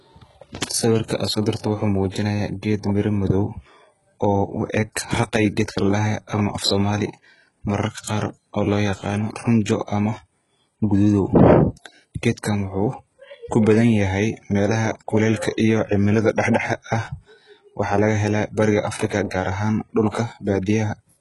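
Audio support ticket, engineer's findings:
Likely HE-AAC compression at a very low rate, consistent with about 12 kbps. Treble above the core band is rebuilt by band replication, not coded. Result: heavy coding damage, nothing above 11.5 kHz, sibilants gritty, lispy and metallic throughout the speech.

Pre-echo at 2.10–2.14 s (33 ms) and 20.09–20.14 s (43 ms). Transform block spreads quantisation noise ahead of a sharp onset late in the block. Result: brief hiss preceding each attack, which sounds softened and smeared.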